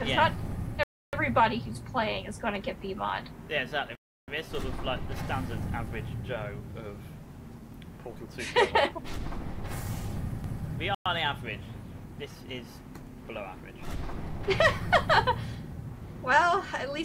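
Packets from the source were likely held up by radio interference, starving the headphone buffer. This is a Bluetooth stall. The audio drops to silence at 0.83 s (0.3 s), 3.95 s (0.33 s) and 10.95 s (0.11 s), then resumes.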